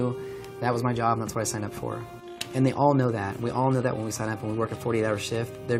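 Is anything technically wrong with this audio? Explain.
No, nothing technically wrong turns up here, so there's nothing to flag in this audio.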